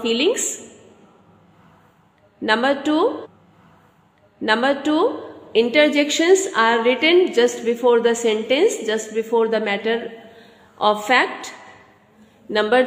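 A stream segment repeated at 3.21 s: the player fetched or queued the same two-second segment twice, so 3.21 to 5.21 s plays again after a small blip at the jump back.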